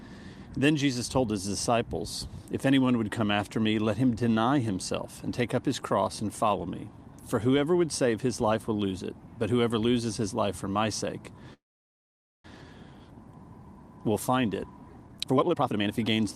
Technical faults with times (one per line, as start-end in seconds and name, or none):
11.53-12.46 call audio freeze
15.06-16.29 jitter buffer speed-up